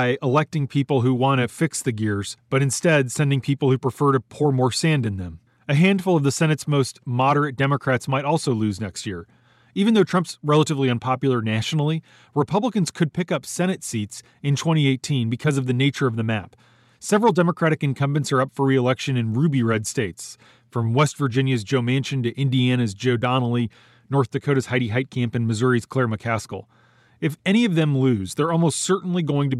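No technical faults can be heard anywhere in this speech recording. There is nothing in the audio that needs a timestamp or further comment.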